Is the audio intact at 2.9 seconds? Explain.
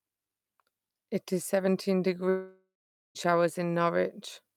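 No. Just after "is seventeen", the speech breaks off from 2.29 to 3.17 s in what is likely a long network dropout. With no audio arriving, the receiver stretches the last sound into a fading buzz, and by 2.9 s only silence is left; that quiet tail lasts about 0.46 s. Unlike a brief packet-loss glitch, the gap runs close to 0.9 s, and the speech resumes further on with the missing stretch skipped, not delayed.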